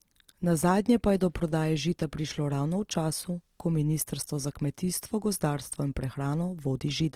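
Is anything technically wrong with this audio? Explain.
Yes. Opus compression runs through the whole clip, most likely a music-mode (CELT) encode at a low rate, consistent with roughly 24 kbps while still keeping full bandwidth. With too few bits, the encoder preserves each band's overall energy but fills the detail by copying lower bands upward or substituting noise. The speech therefore has no obvious spectral gaps or swirling, but it sounds plainly grainy and rough, with a noisy, gritty texture on voiced sounds.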